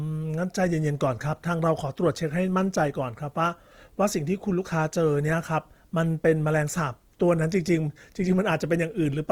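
A speech recording carries Opus compression damage from start to finish, plainly audible as a grainy, rough texture on voiced sounds and a noisy fizz where fine detail should be. The likely cause is Opus in its music mode at a low rate, which fits roughly 24 kbps: starved bands get filled with folded or noise content instead of being left empty. A spectrogram shows energy reaching about 20.2 kHz without holes, but harmonics look smeared and speckled rather than clean lines.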